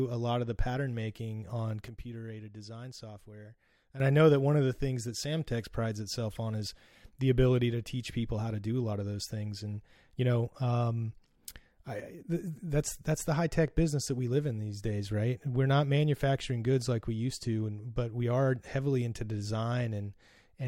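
A speech clip with two sudden gain jumps. After "the pattern making on", the level drops by about 10 dB from 1.88 to 4.0 s, then returns before "I know that one". A second drop of about 6 dB runs from 12.0 to 12.24 s. Voice and background fall together, likely from gain steps applied without a ramp.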